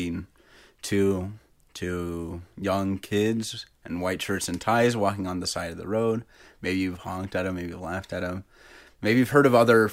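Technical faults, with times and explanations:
No technical faults can be heard in this speech clip. Nothing in the audio points to a defect that needs a time or an explanation.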